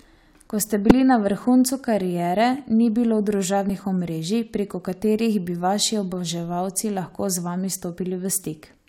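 A speech clip with two brief bursts of damaged data in a compressed stream: one from 0.90 to 0.92 s, just before "na vrhuncu kariere ni", and a shorter one at 3.70 s, between "vrhuncu kariere ni bilo" and "omrežij preko katerih bi". Corrupted bytes make the decoder misread the frame and hunt for the next valid header, so each spot comes out as a chirp, squawk, click or short hole.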